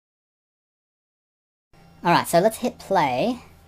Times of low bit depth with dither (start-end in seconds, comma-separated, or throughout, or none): none